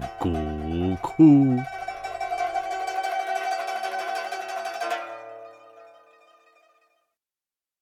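Nothing technically wrong can be heard anywhere in the audio. There are no faults to place in time or trace back to a cause.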